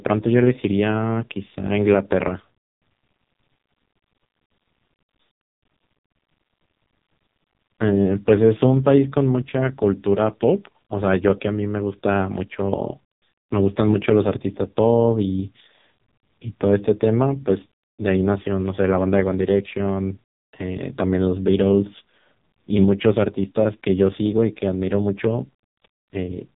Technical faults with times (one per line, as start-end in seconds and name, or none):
0.00-26.58 AMR narrowband mobile codec